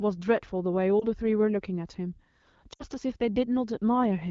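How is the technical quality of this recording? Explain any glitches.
The recording has two short glitches caused by lost AMR speech frames. The audio is carried by the AMR wideband (HD Voice) codec, with content extending to about 7 kHz and light coding damage consistent with around 12.65 kbit/s.

At 0.99 to 1.05 s, one 20 ms frame goes missing, and at 2.73 to 2.83 s, a run of three frames (60 ms) goes missing. When a frame arrives corrupted, the decoder discards it and fills the gap by repeating the last good pitch and vocal-tract settings at a falling gain. The single lost frame sounds like a brief dip or warble. The three-frame gap sounds like a brief repeat of the voice that drops to near silence within two frames, followed by a weak, rough onset as speech resumes.

On a spectrogram, each gap shows frozen harmonics and formants that dim, most visibly in the longer second gap. On the waveform, the amplitude tapers down and then recovers.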